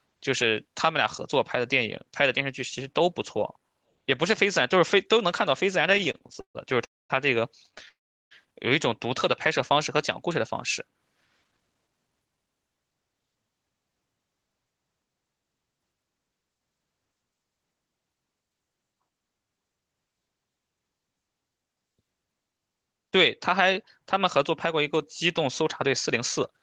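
Speech carried over a call link, band-limited to about 12 kHz in a way that fits a low-bitrate Opus connection. Repeated stalls (stutter) occur from 5.89 to 6.57 s, where fourteen short gaps (the longest 140 ms) are filled with repeated sound, and from 7.66 to 7.89 s with seven gaps of up to 12 ms. Packets arriving late kept draining the jitter buffer, so the audio drags. Two call audio freezes follow, at 6.85 to 7.12 s and 7.89 to 8.33 s. Each inserts a gap of about 250 ms and 420 ms respectively, mostly silent, after which the speech resumes where it stopped. These were likely caused by packets being held up in transit. Jitter buffer speed-up then compresses the audio to 113% speed from 11.44 to 13.96 s, trimming about a third of a second. Milder speed-up at 104% from 24.19 to 24.95 s and at 105% from 25.45 to 26.61 s hurries the delivery without changing the pitch.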